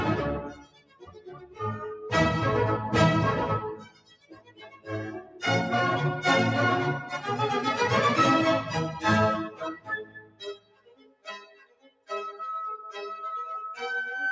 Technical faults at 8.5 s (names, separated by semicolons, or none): noise suppressor applied to music or sounds